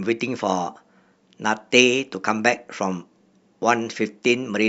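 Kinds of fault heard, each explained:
Nothing stood out on listening to the speech here.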